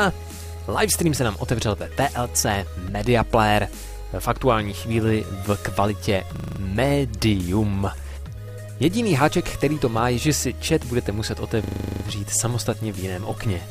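At 6.36 to 6.6 s and again at 11.64 to 12.04 s, a system hang loop repeats one 40 ms slice while the system stalls, giving a rough 25 Hz buzz. Waveforms show identical repeating blocks; spectrograms show vertical stripes every 40 ms.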